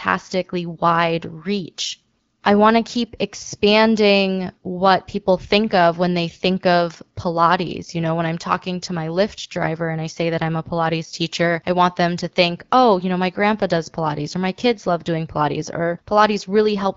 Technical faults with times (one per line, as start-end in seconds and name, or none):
none